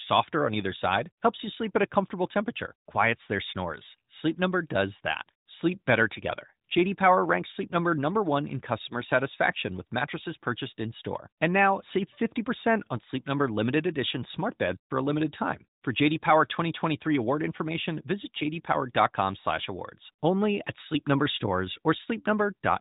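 No faults are present in the speech; the narrowband mobile codec path passes nothing above 3.8 kHz, as expected for that channel.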